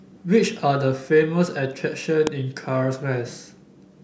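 At about 2.27 s there's an electrical switching spike cutting across the speech: one sharp snap, over in roughly a millisecond, and loud, peaking not far below full scale. It sits on top of the talking rather than interrupting it. What you're hearing is most likely a nearby switch, motor or static discharge throwing off a short arc that the audio line picked up, so it's interference added to the signal.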